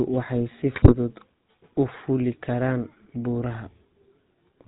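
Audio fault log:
throughout  GSM full-rate codec: The speech passes through a coder that, rather than keeping the waveform, models the vocal tract as a filter and drives it with a regular pulse train, sampling only every third excitation value, a sound that fits the 13 kbps full-rate scheme. Nothing above 4 kHz survives, so the top is dull and boxy, and the coarse pulse excitation gives the voice a plainly audible buzzy, gravelly roughness.
0.74–0.94 s  GSM bit errors: For about 0.2 s, corrupted bits reach the speech decoder, with damage consistent with an error rate around 3 percent striking nearly every 20 ms frame in the span. When the filter, pitch and gain values arrive wrong, each frame is rebuilt with a bent spectrum, a false pitch or a jump in level, so the speech breaks into squawks, pops and gargling before the decoder recovers.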